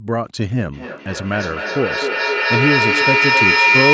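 Speech, and from about 0.73 s to the end there's a feedback howl: a mic and loudspeaker sharing a room keep re-amplifying each other, so a tone around 2 kHz builds, looping back roughly every third of a second, until it peaks about 4 dB above the talking.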